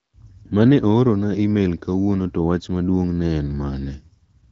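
No technical faults are audible.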